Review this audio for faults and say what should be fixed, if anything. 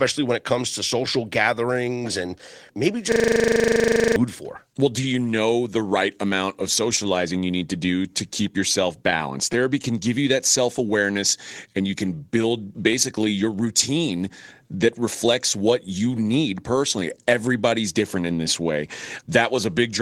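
Clock drift between sender and receiver runs through the whole speech clip. The sending clock is about 3 percent slower than the receiver's, so the jitter buffer keeps draining. Unlike isolated packet loss, the resulting hiccups never stop and always lean the same way. Locking both ends to a common clock, or using adaptive resampling, prevents it.

Repeated timing corrections follow from that drift between 0.13 and 19.57 s. The receiver keeps repeating tiny slices to fill the shortfall, adding roughly half a second in total, and the speech plays at 97 percent speed. Gap concealment differs because it fills random holes rather than making edits that all lean one way. Smooth resampling instead of cut-and-repeat edits would hide the correction.

Scattered short gaps appear twice: a few between 1.06 and 2.71 s, and about four between 9.11 and 10.81 s. Each lost packet, around 10 ms at most, was patched by extending the preceding sound, leaving ticks or smears. 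These are brief and clustered, not spread across the whole clip like drift edits. Better jitter buffering or forward error correction would reduce them.

A system hang loop occupies 3.12 to 4.16 s. The machine froze while the audio hardware kept replaying one 40 ms buffer 26 times, giving a steady 25 Hz buzz in place of about a second of speech. Packet concealment would fade or smear, but this repeats exactly and never decays. Fixing the driver or giving the audio thread higher priority prevents it.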